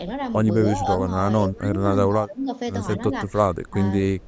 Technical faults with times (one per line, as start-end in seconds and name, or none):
1.50-1.69 speech suppressed in double talk
2.08-2.48 speech suppressed in double talk
3.10-3.33 speech suppressed in double talk
3.66-3.77 speech suppressed in double talk
4.21-4.27 echo leak